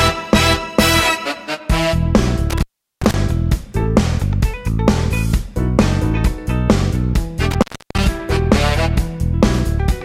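At 2.50 s the sound drops out with a crackle, returning around 3.14 s. The same intermittent contact recurs from 7.51 to 8.06 s. A loose plug or cable connection is briefly losing contact, opening the signal path for about 390 ms in the first event and 330 ms in the second. During each gap faint hiss remains, and the make-and-break of the contact produces crackle at both edges of each dropout.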